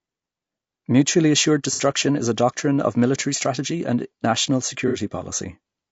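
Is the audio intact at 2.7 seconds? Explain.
No. At 2.7 seconds, as across the whole clip, the speech is likely passing through low-delay AAC compression (AAC-ELD) at a rate consistent with about 32 kbps. Its short frames cannot resolve the voice's pitch harmonics finely and leave too few bits for the detail, so the voice turns plainly rough and grainy, with noise filling the gaps between harmonics and a top band that sounds dulled or synthetic.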